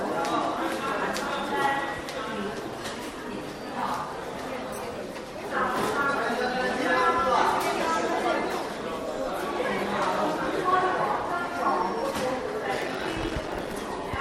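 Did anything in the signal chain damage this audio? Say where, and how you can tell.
Yes, a block size mismatch (padded) in the driver or buffer stage damages the audio from 12.73 to 13.74 s. A steady 46.9 Hz buzz appears, which fits a 1024-sample read block, and the sound runs at about 0.86 of normal speed. The writing stage delivers shorter blocks, and each is zero-filled to full length, inserting a tiny gap every block. Unlike a sample-rate mismatch, timbre stays put, and unlike random underruns, the gaps are perfectly periodic.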